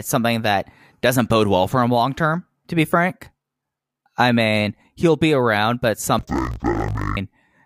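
From 6.19 to 7.19 s, just after "he'll be around but", the speech drops a full octave and sounds doubled and choppy: interleaved audio read as planar. Each 21.77 ms block of alternating left-right samples was split into halves, so both channels play at half speed side by side, repeating at 45.9 Hz. Unlike a sample-rate mismatch, the pace of the speech stays normal; only the pitch falls, with that steady block-rate chop.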